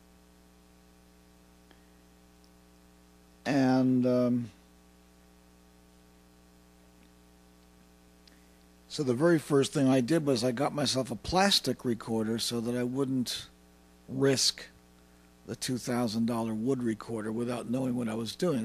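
A drift correction step, likely from clock-matching software abruptly lowering the playback rate to manage its buffer, disturbs the audio from 9.04 to 9.92 s. For those 0.88 s the sound runs about 5.5% slow, with speed and pitch dropping together by about 97 cents, close to a full semitone. The sudden detuning sets in at once at 9.04 s, then snaps back to the original rate and pitch at 9.92 s.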